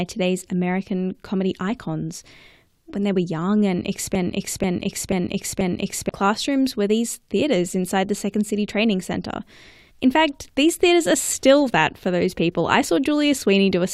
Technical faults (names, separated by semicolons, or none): broken-record loop